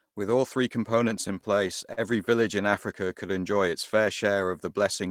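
From 1.21 to 2.0 s, between "all three" and "village in", there are repeated stalls (stutter). Packets arrived late, and the jitter buffer kept running dry. Six times the receiver held the last sound going until new audio came in. Together these fills add about 96 ms, and the longest lasts 43 ms. Nothing is lost. The sound just catches and drags in small hitches across this stretch.

From 2.71 to 3.71 s, after "village in" and before "its fair", there is a jitter buffer slow-down. The buffer needed a bigger reserve. So the receiver repeated tiny slices of the waveform to stretch time. This adds about 75 ms, and the passage plays at 94% speed. The pitch stays put. Sounds come out slightly drawn out and slow.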